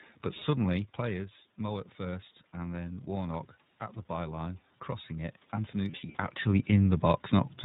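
The whole clip is speech carried through the iLBC codec. Nothing above 4 kHz survives, so it sounds narrow. The coding damage is plainly audible as a rough, slightly synthetic edge. The texture fits 30 ms frames at about 13.3 kbps.

From 5.91 to 6.16 s there are lost iLBC frames. About 150 ms of audio is missing, scattered across 240 ms, which points to roughly five dropped frames. The longest gap runs about 70 ms. The decoder fills each gap by repeating the last pitch cycle with noise. It sounds like a brief held, buzzy vowel. The voice recovers almost at once after each gap. A level change near 6.0 s, from the talker moving, overlaps it.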